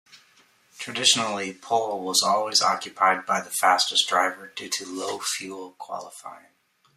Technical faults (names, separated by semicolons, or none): zipper noise